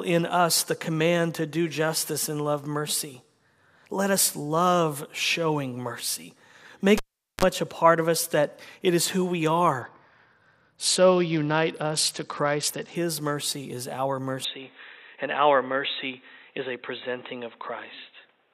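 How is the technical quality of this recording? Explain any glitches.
The recording has three distinct technical faults, each audible and each clearly visible on a spectrogram or waveform.

From 6.98 to 7.45 s, just before "a part of us", the cable is pulled and plugged in. A live lead loses contact for about 0.42 s and then reconnects. The waveform shows a pop spike, a flatline, a 42 ms burst of 50 Hz mains buzz as the tip touches, and a second pop. On a spectrogram the buzz appears as stacked harmonics.

From 9.81 to 12.95 s, between "it is who we" and "mercy is our", there is a Bluetooth SBC bit pool drop. A congested link forced the codec from a bit pool of 31 down to about 9, which fits roughly 72 kbps. The treble dulls and gritty noise rises. A spectrogram shows the upper bands going blank, with speckled grain across the band that remains.

From 14.45 s to the end, after "mercy is our", the sound abruptly turns boxy, likely because the input switched to a poorer device. 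Nothing is passed above 3.9 kHz, so the spectrogram shows a hard ceiling. There is no gap in the waveform and no step in level, but a new noise floor appears, very roughly 45 dB below the signal.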